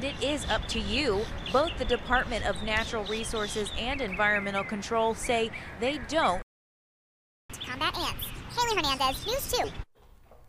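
At 6.42 s the sound stops dead in mid-flow. This is a playback stall. The output stays silent until 7.50 s, a gap of about 1.07 s. The likely cause is a player that ran out of data or had its audio thread blocked. No new samples reached the output, so nothing was heard.

At 7.50 s the sound returns, but too fast. This is catch-up at higher speed. The player is working through its backlog by resampling at 1.5 times normal speed. Because resampling changes speed and pitch together, everything sounds higher, by about seven semitones. The rushed, raised sound lasts until 9.64 s, just over 2 s. At that point the catch-up ends.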